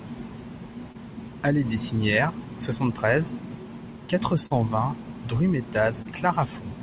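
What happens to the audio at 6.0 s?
A short concealed packet loss from 6.02 to 6.07 s: 20 ms arrived too late, so the decoder continued the preceding sound, heard as a brief smear.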